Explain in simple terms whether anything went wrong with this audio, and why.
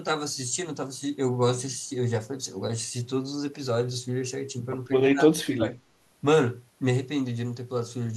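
Something did go wrong, briefly. From 5.11 to 5.77 seconds the speech suddenly sinks far down, almost vanishing, for well under a second, then returns. This is speech suppressed in double talk. The likely cause is that the other person on the call spoke at the same moment, and the echo canceller, unable to tell this talker apart from its own loudspeaker echo, turned everything down. Unlike a network dropout, which cuts sound abruptly and at random, this dip tracks the overlap in conversation.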